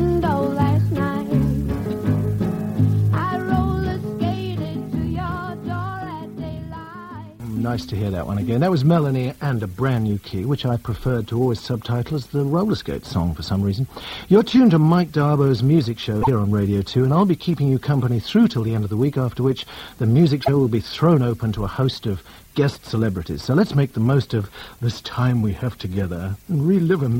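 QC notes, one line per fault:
16.21–16.28 s and 20.42–20.49 s, broken MP3 bit reservoir: each 70 ms glitch, spanning roughly three 26 ms frames, follows the sound jumping ahead. The likely cause is frames decoding against another frame's borrowed bytes, unlike a clean dropout's silence.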